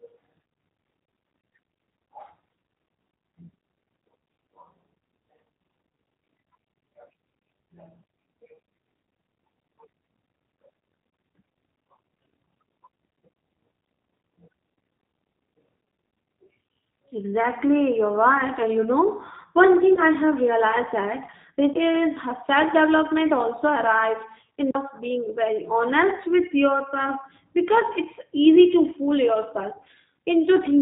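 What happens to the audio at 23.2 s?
At 23.2 s the speech carries the same G.729 codec damage heard through the whole clip, plainly audible here. The codec rebuilds each 10 ms frame from a vocal tract filter, a pitch predictor and a few pulses, at a rate that fits 8 kbit/s, so the speech sounds slightly rough and synthetic. On a spectrogram, energy stops dead at 4 kHz, and harmonics look smeared and blocky in time rather than clean.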